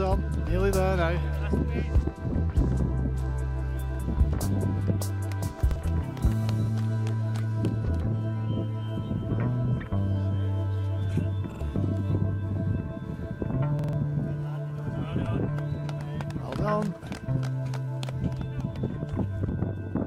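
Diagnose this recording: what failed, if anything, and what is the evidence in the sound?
The failure sits at the driver or buffer stage, as a repeated buffer on four occasions. A block of about 46 ms replays with a hard join at each repeat, heard as a short stutter: once extra at 3.95–3.99 s and 5.71–5.76 s, twice at 11.52–11.61 s, and three times at 13.79–13.93 s. The block length fits a 2048-sample buffer. New audio arrived late, so the device replayed its last block, and roughly 50 to 150 ms of sound was lost each time.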